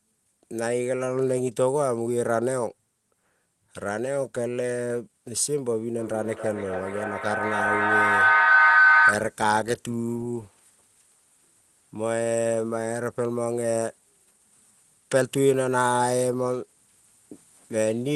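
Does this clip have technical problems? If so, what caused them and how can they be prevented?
Yes. A feedback howl runs from 5.98 to 9.39 s, peaking about 7 dB above the speech. Another device in the room kept re-capturing the loudspeaker, gaining level each trip, narrowing to a tone near 1.5 kHz with repeats roughly every 300 ms. Joining only one device per room, or muting the others, prevents it.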